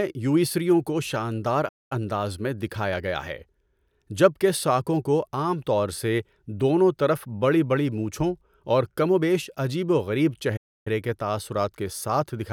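At 1.68 s, right after "یوئیژیوں کو شاندار", the speech cuts to silence for about 0.22 s before picking up with "اندازمیں دکھایا گیا ہے". At 10.56 s it drops out again for about 0.29 s before "کے تاثرات کے". Both are playback stalls, likely the player starving for data and then resuming where it left off.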